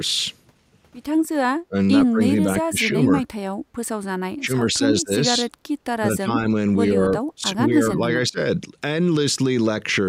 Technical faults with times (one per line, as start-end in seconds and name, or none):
1.56-1.75 speech suppressed in double talk
2.10-3.12 speech suppressed in double talk
3.62-3.74 background gated by the echo canceller
4.38-5.41 speech suppressed in double talk
5.99-6.31 speech suppressed in double talk
6.94-7.00 speech suppressed in double talk
7.35-8.38 speech suppressed in double talk